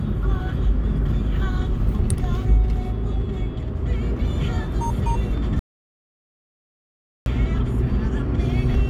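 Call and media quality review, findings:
Audio dropout to silence, 5.59 to 7.26 s. The everyday sound cuts off mid-flow and comes back about 1.67 s later. The gap is silent with no room tone or noise floor, so whatever happened in there is just gone. Likely the input side: a device briefly disconnecting, a link dropping, or a stray mute, with the recorder carrying on writing silence until the signal returned.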